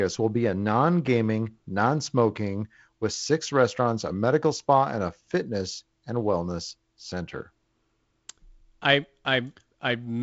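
No faults found in the speech; it is carried over G.722 wideband coding, consistent with the 48 kbit/s mode, with nothing above about 7.8 kHz and light coding hiss in the upper band.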